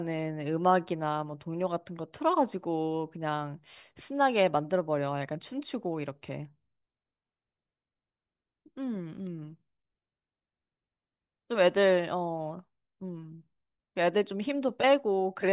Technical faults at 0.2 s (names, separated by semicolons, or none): none